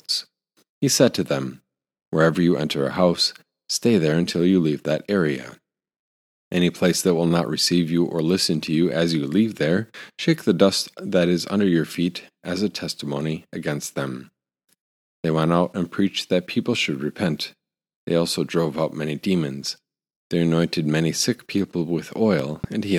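At 22.39 to 22.66 s, a loud pop: two sharp thumps about 10 dB above the speech, likely a voltage pulse from a plug, switch or static discharge.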